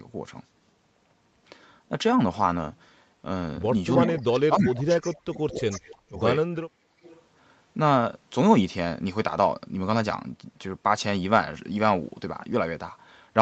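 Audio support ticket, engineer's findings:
Speech suppressed in double talk, 4.01–6.20 s: speech level drops in pieces, around 2 s affected in total, deepest drop around 35 dB. Second episode 6.55–7.00 s, around half a second affected, same depth. Likely cause: echo canceller on the loudspeaker side misread local talk over far-end playback as echo and attenuated it.

Echo leak, three spots: 4.67–4.72 s and 5.56–5.95 s, each around 20 dB below the speech; 7.03–7.21 s, around 30 dB below. A delayed copy of the voice, 298 ms behind, returns each time. Likely cause: the loudspeaker side's echo canceller left residual playback in its mic signal, which was sent back to the far end.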